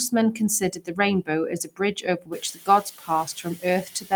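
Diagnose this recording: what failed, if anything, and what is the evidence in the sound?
Call processing is the culprit: noise suppressor artifacts run throughout, with the background pulled down about 6 dB band by band, frame to frame.

The same stage also causes speech cut by the noise suppressor at 0.6–0.99, 1.64–1.8, 1.96–3.27, 3.44–3.64 and 3.85–4.12 s, where speech dips about 13–16 dB.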